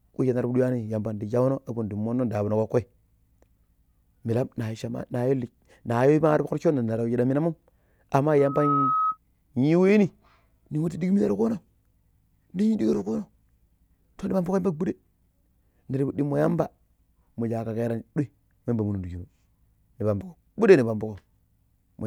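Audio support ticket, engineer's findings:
Single pure tone swelling into a squeal, 8.38 to 9.18 s, pitched at 1.3 kHz. Rises over roughly a third of a second, peaks near the level of the speech itself, then stops. Diagnosis: loudspeaker feedback squeal. Probable component: mic near its own monitor or PA speaker. Mechanism: loop gain above unity at 1.3 kHz, tone regenerates each pass until the loop is broken. Check mic placement, monitor level, notch at 1.3 kHz.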